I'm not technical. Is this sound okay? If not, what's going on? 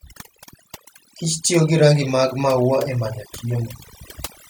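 No, it isn't quite right. The whole clip shows overdone noise removal. A cleanup tool was set too strong, so between phrases the background drops to near silence with twinkling specks.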